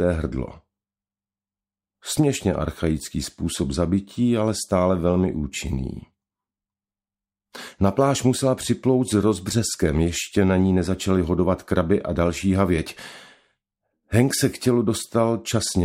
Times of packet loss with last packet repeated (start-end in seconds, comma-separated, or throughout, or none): none